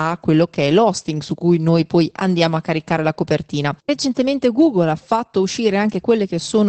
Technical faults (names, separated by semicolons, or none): Opus voice compression